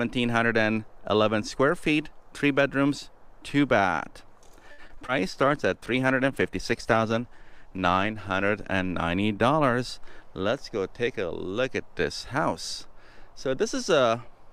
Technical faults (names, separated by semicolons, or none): repeated packet loss (robotic sound); call bitrate drop